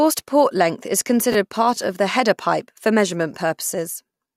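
Speech, with chunks out of order at 1.32 to 1.34 s between "port length is" and "part of the header": one 10.67 ms chunk plays a chunk late, leaving a brief jumbled moment.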